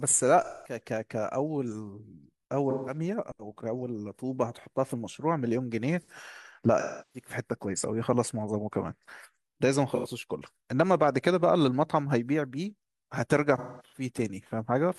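AAC frame loss with concealment occurs five times in this speech: 0.44–0.80 s (about 213 ms), 2.70–2.98 s (171 ms), 6.79–7.29 s (341 ms, the longest), 9.95–10.07 s (85 ms), and 13.58–14.06 s, where losses scatter across roughly 340 ms with the longest run near 200 ms. Missing frames are rebuilt from the last good spectrum, giving smeared, noisy, phasey patches that sag toward quiet in the longer gaps.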